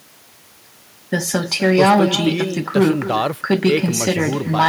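Throughout, the far end is playing the call over a loudspeaker and nothing cancels what its microphone picks up. This is echo with no canceller: the speech returns around a third of a second later, about 14 dB quieter, as a thin shadow behind every phrase.

From 1.14 to 2.15 s, a stage is overdriven by about 8 dB, so hard clipping flattens the peaks into a harsh fuzz on loud syllables. Milder overload of about 4 dB, from 3.51 to 4.11 s and 4.60 to 4.68 s, adds crackle on the peaks.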